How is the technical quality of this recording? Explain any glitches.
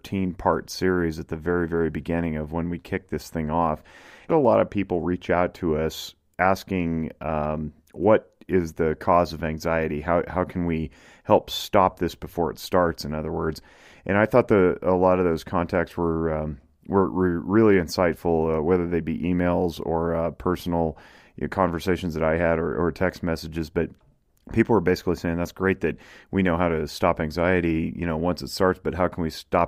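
The recording has one clear glitch, a stream segment skip, at 4.28 s. The system most likely failed to fetch one chunk of the segmented stream and the player moved straight on to the next chunk instead of waiting. That gap cuts the sound abruptly. Right after "kicked this thing off" the audio jumps forward with a brief blip and resumes at "a lot of people", so whatever lay between those points is absent rather than silent.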